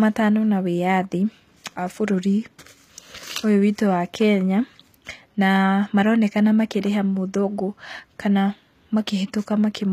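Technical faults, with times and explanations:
Throughout, HE-AAC compression: the treble is likely rebuilt from copied lower bands, consistent with a 24 kbps encode, leaving plainly audible damage and nothing above 14.9 kHz.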